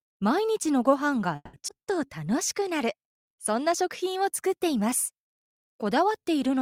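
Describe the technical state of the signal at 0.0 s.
At 0.0 s the signal is intact, with no technical fault present at that moment.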